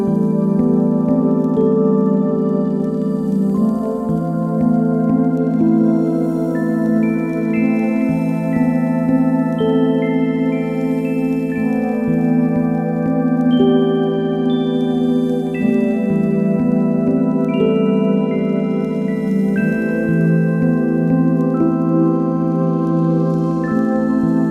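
No faults can be heard anywhere in this recording.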